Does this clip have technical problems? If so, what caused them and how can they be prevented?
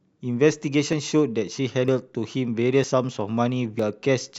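Yes. The speech skips at 0.93, 1.88, 2.84 and 3.79 s, each losing about 40 ms, likely audio missing between chunks at 1-second boundaries. Keep capture running continuously across chunk handovers.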